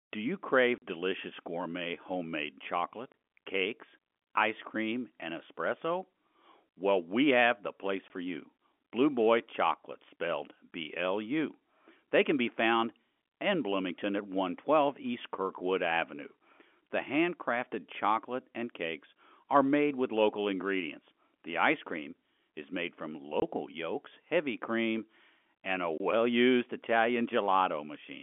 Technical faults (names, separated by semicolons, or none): packet loss filled with silence